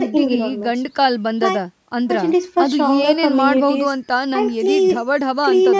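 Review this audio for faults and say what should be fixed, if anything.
Nothing here needs fixing: the speech has just been through a call's usual microphone processing, so the lowest bass is trimmed and nothing reaches above 8 kHz, which is exactly what that kind of path does.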